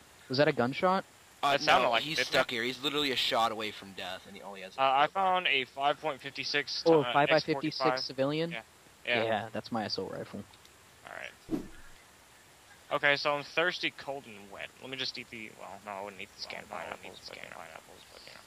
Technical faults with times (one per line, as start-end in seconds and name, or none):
16.42-18.47 doubled audio track